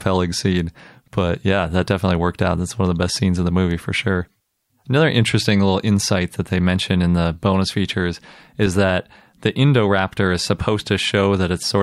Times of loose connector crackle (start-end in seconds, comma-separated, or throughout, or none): 8.63-8.67